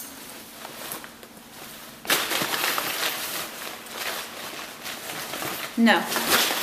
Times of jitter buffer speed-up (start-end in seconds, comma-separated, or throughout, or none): none